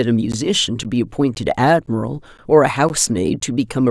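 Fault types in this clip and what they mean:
Gap between chunks: the speech was delivered in half-second blocks with 13 ms of silence inserted at each join, so nothing is lost but the flow halts. It shows as seven hard-edged holes, one every half second, from 0.32 s to 3.4 s.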